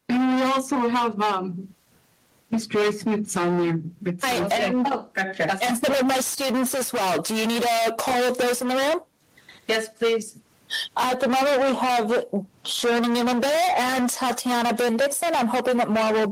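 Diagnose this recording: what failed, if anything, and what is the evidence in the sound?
Gain pumping runs through the whole recording: the gain swings by around 20 dB, leaving the level flattened and squashed. The likely cause is input gain set far too high, with a fast limiter clamping down repeatedly.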